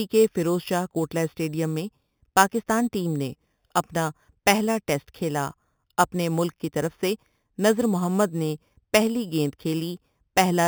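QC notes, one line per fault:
Throughout: imaging from sample-and-hold upsampling. The speech carries a bright metallic fizz in the 4 to 8 kHz band, about 15 dB below the voice, that rises and falls with it. Each sample was repeated rather than smoothly interpolated, which points to an 8 kHz original raised to 44.1 kHz. The band below 4 kHz is mirrored upward, so this fizz moves opposite to the voice's pitch, which steady hiss never does.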